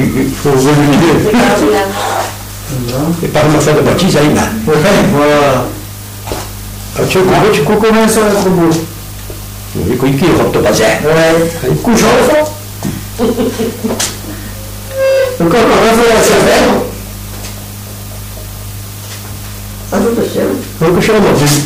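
Hard clipping runs through the whole clip. The signal's driven about 25 dB past what the chain can pass, so roughly a fifth of it gets sliced flat at the ceiling. Those squared-off tops pile on high harmonics, giving a harsh fuzz on everything loud.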